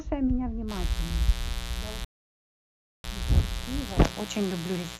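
From 0.67 s to the end, a steady, raspy mains buzz sits roughly 10 dB under the speech: 60 Hz switching spikes and their harmonics leaking in, twice per cycle.

At 2.05 s the sound drops to silence until 3.04 s, then resumes exactly where it stopped. This rebuffering stall adds 0.99 s while the player waits for data.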